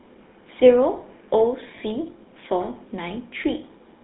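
From start to end, the speech carries the sound of the GSM full-rate codec. The coder models the throat and mouth as a filter and drives it with a sparse, regular pulse train, discarding most of the fine detail of the excitation. The result is a plainly audible buzzy, gravelly roughness. The band runs from about 200 Hz to 3.7 kHz, so there is no air or sibilant sparkle. The character points to the 13 kbps full-rate coder.

At 1.76 to 1.79 s there are lost GSM frames. The decoder had no good data there. It reused the settings of the last good frame. That fills the gap with a brief rough, metallic ring instead of silence. The gap is short, so the ring never fades to nothing. Its length fits a single missing 20 ms frame.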